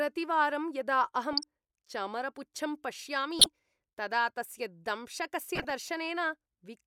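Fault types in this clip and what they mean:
Corrupt frame decoded: Damaged compressed frames got played as-is, so the decoder put energy at the wrong frequencies for each bad frame. There are three short bursts: 1.33 to 1.43 s, 3.39 to 3.46 s (right before "तदा तस्य"), and 5.55 to 5.71 s. Each is a blip of misplaced noise lasting about 70 to 150 ms, which points to a handful of frames in a row. The first two are fairly loud, and the last one is quieter.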